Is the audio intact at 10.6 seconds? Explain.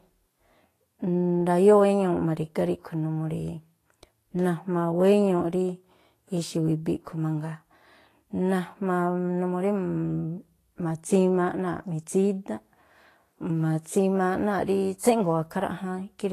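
No. At 10.6 seconds the speech carries the same damage heard across the whole clip. It is likely Vorbis compression. There is nothing above about 14.2 kHz. The treble sounds hissy and grainy rather than detailed. The codec keeps a smooth spectral outline but quantises the fine high-frequency detail coarsely, so it comes back as noise of similar energy. Consonant attacks blur. The damage is plainly audible, which fits a low bitrate of around 33 kbps.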